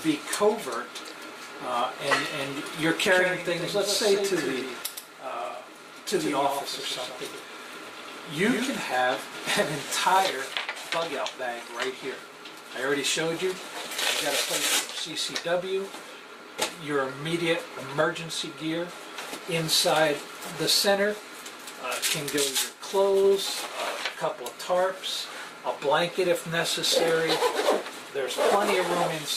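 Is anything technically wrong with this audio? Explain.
Yes. From 3.06 s to 8.76 s there is a doubled audio track. A second copy of the sound runs about 150 ms behind the first, roughly 5 dB quieter. It is full-band and dry, with no decay or room colour. It switches on and off abruptly at those points. The likely cause is the signal being captured twice, once by a slower path, or an edit leaving two copies out of step. The result is a hard, slapback-style echo.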